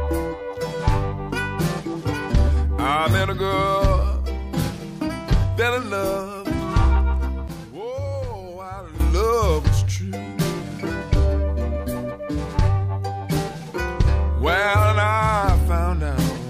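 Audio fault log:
7.48–9.00 s, sudden gain jump: the digital gain most likely stepped from one sample to the next with no ramp, as when a level setting or bit shift is applied instantly, and it stepped back at 9.00 s. The sound and its background noise drop together by about 12 dB for this stretch, then return to full level just as abruptly. Because the noise floor moves in step with the sound, the change reads as a gain change in the chain rather than a change in the source.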